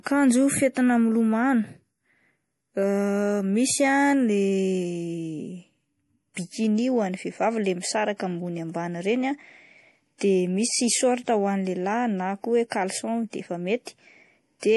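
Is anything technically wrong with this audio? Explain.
Yes, there are two problems. Throughout, the speech sounds watery and swirly with nothing above 11.5 kHz, likely MP3 compression at a low bitrate around 48 kbps starving the weaker frequency lines. There's also pre-echo from 10.18 to 10.21 s and again at 12.70 s, just after "ko hoe". The codec spread its block noise ahead of a sharp onset, so a brief hiss precedes each attack and softens it.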